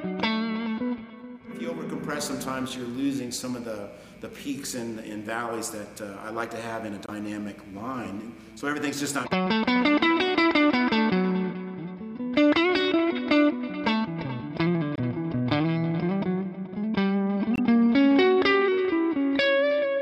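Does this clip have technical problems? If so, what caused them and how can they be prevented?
Yes. Corrupt frame muted: abrupt silent holes at 7.06–7.10 s, 14.96–15.00 s and 17.55–17.60 s, fitting one or two rejected frames replaced by silence. Unlike a dropout, timing is kept. Protect the stream with error checking and retransmission or forward error correction, and let the decoder conceal lost frames instead of muting them.

Corrupt frame decoded: a short glitch at 13.15–13.18 s, peaking around -25 dBFS, where damaged data was played anyway. Unlike a muted frame, it adds sound rather than silence. Use checksums so damaged frames are caught and concealed rather than decoded.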